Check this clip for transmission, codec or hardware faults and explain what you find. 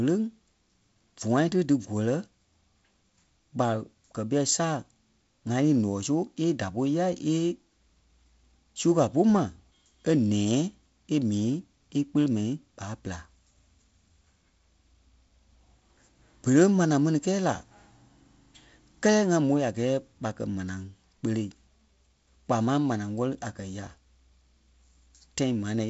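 I find no transmission, codec or hardware faults in this clip.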